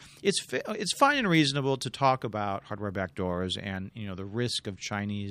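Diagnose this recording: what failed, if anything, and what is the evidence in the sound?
Nothing failed; the speech shows no fault at any stage.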